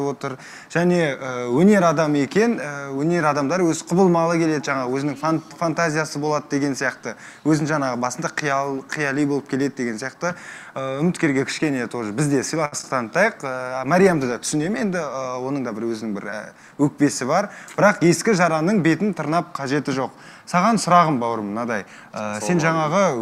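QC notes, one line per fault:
12.65–12.74 s, short stall from a late packet: the sound holds about 68 ms while the jitter buffer runs dry, then resumes; spectrogram shows a smeared, flattened stretch.
12.78–12.85 s, short concealed packet loss, two adjacent: about 40 ms never arrived and was synthesised from the preceding sound; waveform shows a brief smear.
13.41–15.75 s, call bitrate drop: encoder falls from 96 to 27 kbps, lowest for about 1.1 s; spectrogram loses its upper band, sound turns muffled and watery.
15.15–15.79 s, jitter buffer speed-up: repeated pitch-period cuts remove roughly 70 ms, playing 111% fast at unchanged pitch; waveform has whole periods dropped, audio sounds hurried.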